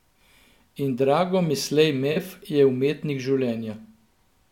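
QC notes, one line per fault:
2.12–2.17 s, AAC frame loss with concealment: a roughly 43 ms smeared, noisy patch in the speech, consistent with two lost frames. The decoder bridged the gap by reusing the last good spectrum with altered phase, so detail blurs rather than dropping to silence.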